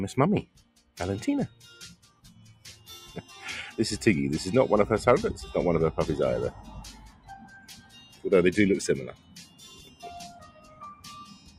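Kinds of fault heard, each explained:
noise suppressor applied to music or sounds: a speech-tuned suppressor stays on and treats steady sound as noise, so level keeps pumping by about 15 dB, unlike a fixed gain change.
sound cut by the noise suppressor: six stretches from 0.46 s to the end sink by about 10 to 13 dB, dipping rather than vanishing as a dropout would.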